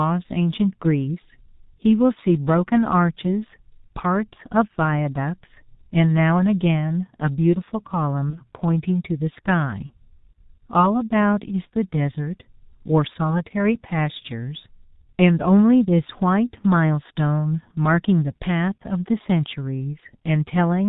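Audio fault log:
throughout: G.723.1 codec, muffled and hoarse, consistent with the 6.3 kbit/s mode. Spectrogram shows nothing above 4 kHz, and consonant energy is smeared across coarse 30 ms frames.
8.30–8.40 s and 9.86–9.92 s: VoIP packet loss concealed by the speech codec. Each gap fits one lost 30 ms frame, extrapolated into a fading buzzy tone or coloured noise, visible as a dipping waveform envelope.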